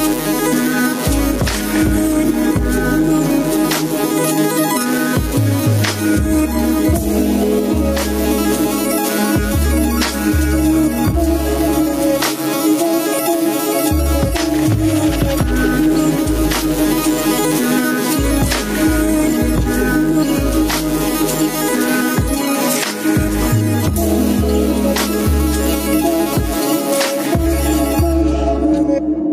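Gain pumping runs through the whole clip, with the gain swinging by around 10 dB. The likely cause is input gain set far too high, with a fast limiter clamping down on each peak and releasing afterwards. Unlike a noise gate, which drops the gaps towards silence, this lifts them, and the loud and soft passages sit squashed close together.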